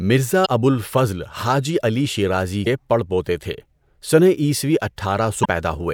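At 0.42 s before "ابو الفضل", 2.63 s between "علی شیرازی" and "پڑ پوتے", and 5.41 s, damaged data in a compressed stream makes the decoder lose sync, causing 40 ms glitches, each heard as a chirp, squawk, click or short hole, with abrupt waveform jumps.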